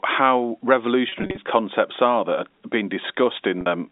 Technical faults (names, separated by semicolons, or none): packet loss with pitch repetition